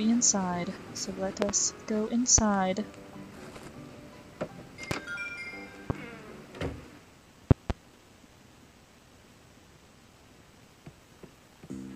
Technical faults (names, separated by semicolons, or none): loud pop; compressed frames skipped